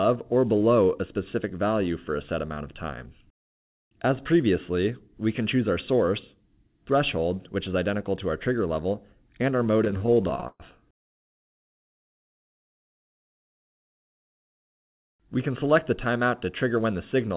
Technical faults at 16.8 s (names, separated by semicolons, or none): jitter buffer speed-up